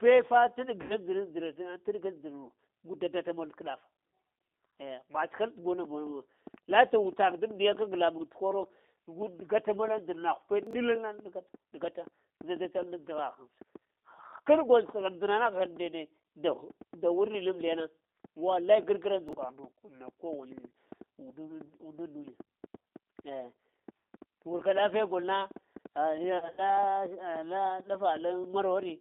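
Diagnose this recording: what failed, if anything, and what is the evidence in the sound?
The whole call runs through the G.729 codec, and you can hear it: the band is squeezed to roughly 250 Hz to 3.7 kHz, and there's that rough, slightly synthetic edge from an 8 kbit/s model-based coder rebuilding the voice from a filter, a pitch predictor and a few pulses.

There's VoIP packet loss concealed by the speech codec at 0.82 to 0.99 s, about 80 ms missing, and again at 26.38 to 26.71 s, where 120 ms drops out scattered over 200 ms. The decoder stretches its last pitch into a fading buzz or coloured noise, and the voice stays weak for a bit afterward.

Right after "tə buna", from 5.85 s to 28.90 s, a train of clicks ticks over everything, pauses included. There are around a hundred at an uneven 4.25 per second, peaking roughly 5 dB above the signal. The likely cause is interference from nearby gear or a faulty connection or power supply.

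Two spots have chunks out of order: 10.67 to 10.73 s, where a chunk plays two slots late, and 19.29 to 19.33 s, one slot late. You get a brief jumbled blip with hard joins. The 21.33 ms chunks point to the driver or buffer stage.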